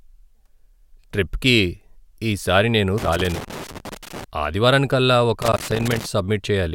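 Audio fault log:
2.98–4.24 s and 5.42–6.06 s: loose connector crackle. Two irregular bursts of scratchy crackle break into the speech as a worn or dirty contact intermittently opens and closes, chopping the signal on and off, with sharp pops wherever DC sits on the line.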